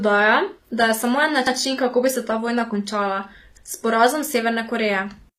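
Throughout the speech the treble sounds plainly synthetic: s sounds come out gritty and metallic, and the upper harmonics fail to line up with those below them. The likely cause is HE-AAC compression, which codes only the lower spectrum and rebuilds the top by copying lower bands upward, consistent with a low bitrate around 24 kbps.

From 1.47 to 1.57 s there is a stutter, as a 100 ms stretch of audio plays twice in a row. This comes from overlapping chunks: the audio was handled in 2.0 s pieces, and the next piece started 100 ms before the previous one had finished.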